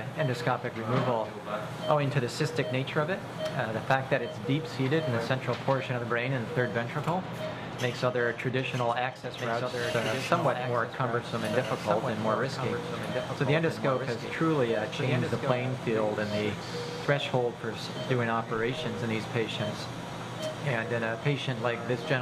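From 9.24 s to 15.52 s the audio carries a doubled audio track: a full-band copy trails about one and a half seconds behind, roughly 5 dB quieter, with no decay or room colour. It likely comes from a second, slower capture path. A spectrogram would show each pattern repeated and shifted, beginning and ending abruptly.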